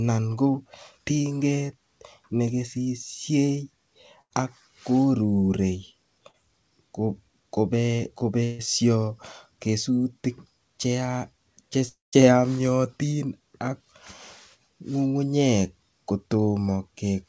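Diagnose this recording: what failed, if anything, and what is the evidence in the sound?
Network stage, burst of packet loss at 4.22–4.33, 6.28–6.37 and 8.44–8.62 s: about 90, 60 and 150 ms of audio went missing, filled by fading continuations before the sound jumps ahead.

At 11.89–12.15 s, about 240 ms vanishes. A fading continuation gives way to roughly 160 ms of silence, likely a long network dropout on the call path.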